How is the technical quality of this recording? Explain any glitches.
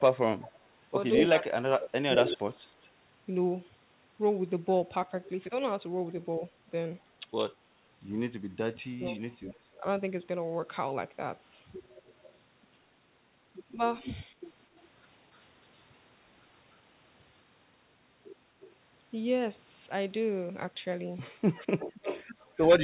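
Two call problems keep coming back here: echo leak and speech suppressed in double talk. Everything comes through a narrowband path with nothing above 4 kHz, which fits a G.711 A-law call chain.

Echo leak shows up from 0.4 to 2.89 s, 9.05 to 14.83 s and 18.61 to 22.67 s. You hear a delayed copy of the speech trailing by 203, 259 and 307 ms, sitting about 10, 20 and 15 dB under it. It's likely a speakerphone whose echo canceller let its own playback slip back into the call.

Speech suppressed in double talk hits 1.17 to 2.42 s, 6.4 to 9.83 s and 14.25 to 14.7 s. The speech dips or drops out in chunks, by up to about 30 dB in the first two stretches and about 20 dB in the last. The likely cause is both sides talking at once, so the canceller couldn't separate talker from echo and turned everything down.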